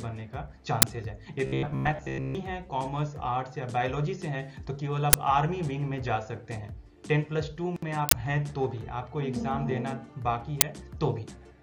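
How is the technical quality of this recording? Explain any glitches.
The recording has clear technical faults: four loud digital glitches and one stretch of robotic buzzing.

Uninitialised buffer: at 0.82 s, 5.13 s, 8.09 to 8.13 s and 10.61 s, a block of leftover memory plays as audio, 10 ms long each time except 40 ms at 8.09 s. Each is a sudden loud crack, and the 40 ms one is a burst of digital noise. Its noisy texture and length set it apart from a single-sample click.

Robotic sound from repeated short buffers: from 1.46 s to 2.35 s the sound becomes a rigid, metallic buzz fixed at 66.7 Hz. The likely cause is late audio delivery, with the software looping the last 15 ms while most of the real material in that stretch is skipped. Unlike flanging or vibrato, the buzz pitch stays locked regardless of the content.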